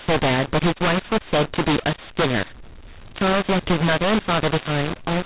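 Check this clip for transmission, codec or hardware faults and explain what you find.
One fault runs through the whole clip: a mu-law and A-law mix-up. The speech was coded as mu-law but decoded with the A-law table, scrambling sample levels and lifting the quietest ones well above silence. The result is harsh, distorted speech with noise filling the pauses, heard within the normal 4 kHz G.711 telephone band.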